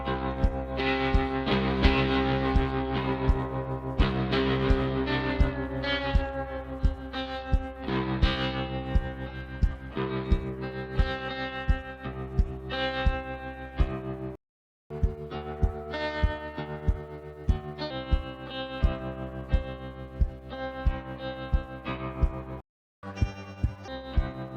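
At 14.35 s the sound cuts out in mid-flow for about 0.55 s, a playback stall, most likely the player running dry of data or its thread being blocked, so output falls silent until it recovers. From 14.90 s to 17.90 s the audio runs fast and sharp, about two semitones up at 1.15 times speed. This is catch-up at higher speed, with the player resampling its backlog to regain lost time before returning to normal. At 22.61 s a second silent gap lasts 0.42 s, likely from the same starved or blocked playback. A harsher rush follows from 23.03 s to 23.88 s at 1.5 times speed, roughly seven semitones high, as the player compresses a shorter catch-up into under a second.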